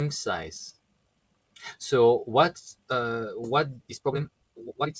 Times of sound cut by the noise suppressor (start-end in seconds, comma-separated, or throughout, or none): 0.72-1.62, 2.73-2.90, 4.29-4.59